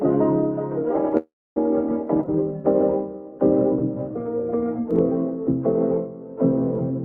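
At 1.17 s there's a call audio freeze lasting until about 1.58 s. The last bit of sound gets stretched into a short fading buzz or hiss, then drops to silence for roughly 270 ms, about 390 ms of filler in all. It's likely that packets stalled in transit and the jitter buffer ran dry. When they caught up, playback resumed where it left off. Nothing is lost, but everything after that point now runs about 390 ms late.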